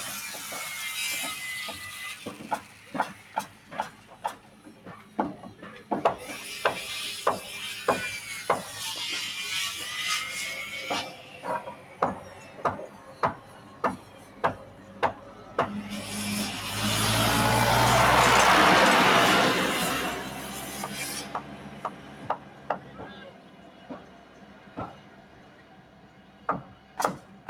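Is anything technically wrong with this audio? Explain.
Yes. A noise suppressor designed for speech was left running on this audio, so the noise suppressor is applied to music or sounds it was never meant for. Throughout the clip it treats sustained tones, ambience and reverberant tails as noise and pulls them down, with its gain swinging by around 10 dB. Onsets slip through while anything held or decaying sinks, so the sound pumps and thins instead of sitting at a stable level.

In four stretches the sound is cut by the noise suppressor more heavily than elsewhere: 2.62 to 5.18 s (dropping by about 6 dB), 11.81 to 11.96 s (about 4 dB), 12.94 to 15.54 s (about 5 dB), and from 20.21 s to the end (about 6 dB). The suppressor mistakes the steady or fading material in these spans for noise, so its level dips and its decays are cut short, while sudden attacks come through largely intact.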